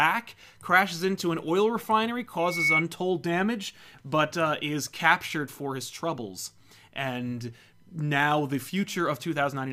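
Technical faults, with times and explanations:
2.39 to 2.84 s, loudspeaker feedback squeal: after "into an oil refinery", a 2.2 kHz tone swells over roughly a third of a second to about 5 dB above the speech, then stops before "damage but uh is". The microphone is re-amplifying its own loudspeaker at that frequency, which a spectrogram would show as a single bright horizontal line that brightens as it grows.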